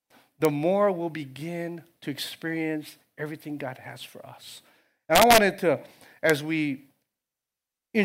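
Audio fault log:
0.45 s, 5.15–5.38 s and 6.30 s, integer overflow: peaks pushed about 0 to 1 dB past full scale wrap to the opposite sign instead of being limited. This gives sharp cracks, harsher than clipping's flattened buzz, first just before "more we'll begin to".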